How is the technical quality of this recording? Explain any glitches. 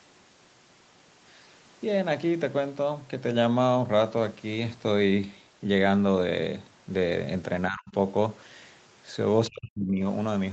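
The speech has two short, deep dropouts in its last few seconds. The whole recording tops out at 8 kHz, as expected from a wideband Opus call path.

From 7.69 to 7.94 s and again from 9.48 to 10.04 s, the voice sinks by roughly 40 dB. This is speech suppressed in double talk. The likely cause is an echo canceller mistaking the talker for loudspeaker echo. Unlike packet-loss gaps, the voice is turned down by the canceller rather than lost in transit.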